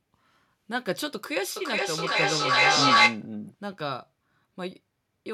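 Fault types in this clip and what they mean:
Feedback echo between two devices: the speech comes back roughly every 0.4 s from 1.56 to 3.29 s, building to about 11 dB above the speech instead of dying away like ordinary echo.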